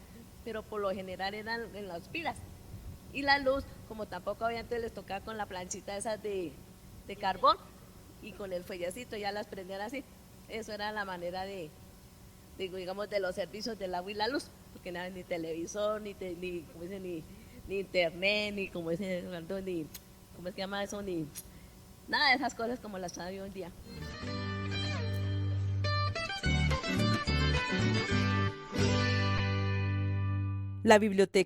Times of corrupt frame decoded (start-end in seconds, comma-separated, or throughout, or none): 5.33-5.36, 18.65-18.68, 29.37-29.40